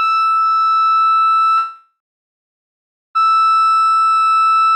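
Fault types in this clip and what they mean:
Long network dropout: from 1.57 s to 3.17 s the music turns into a fading buzz that leaves about 1.16 s of silence, then resumes with roughly 1.58 s lost, likely because audio stopped arriving and the receiver stretched the last sound.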